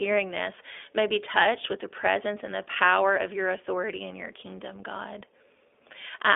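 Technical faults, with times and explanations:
Throughout, iLBC codec. The speech is confined to a telephone band of about 300 Hz to 3.5 kHz, so it sounds thin and muffled. Each 20 ms frame is coded on its own, which gives a plainly audible rough, synthetic edge, consistent with iLBC's higher-rate mode.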